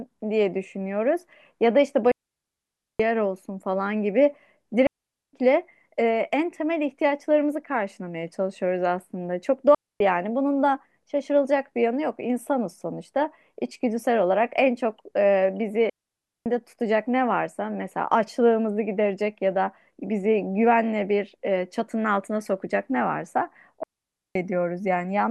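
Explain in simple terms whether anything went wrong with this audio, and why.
The speech cuts out five times from a digital wireless dropout: at 2.12–3.00 s, 4.87–5.33 s, 9.75–10.00 s, 15.90–16.46 s and 23.83–24.35 s. Each time the radio link lost too much data, so the receiver muted, leaving a clean silent gap with no noise burst.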